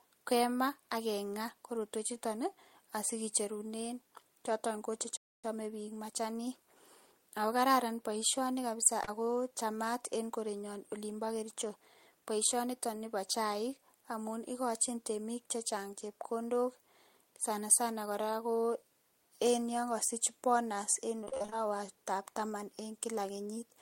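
A playback stall at 5.17 s cuts the speech for about 0.27 s before "bik machanik" resumes, likely because the player ran short of data or was blocked.

Short concealed packet loss at 9.04 s, after "akokararan baishoni kabisa", leaves about 40 ms missing. The decoder extends the preceding sound over the gap, giving a brief smear.

Repeated packet loss (robotic sound) from 21.21 to 21.54 s, after "en yangasich bonus en", breaks the audio into what sounds like eight short gaps, none longer than 32 ms. Patching covers roughly half the span, and the result sounds choppy.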